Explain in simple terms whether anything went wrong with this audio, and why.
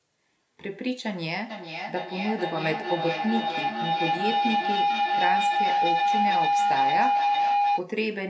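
A shrill tone around 700 Hz swells from 1.5 to 7.9 seconds, with the sound coming back about every 0.4 seconds. This is feedback howl: two devices in one room on the same call keep replaying each other, louder each time.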